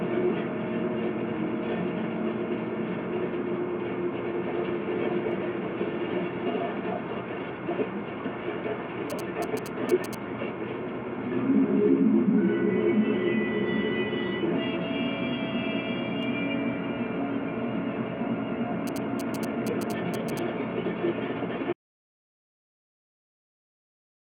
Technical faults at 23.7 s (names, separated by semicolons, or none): audio dropout to silence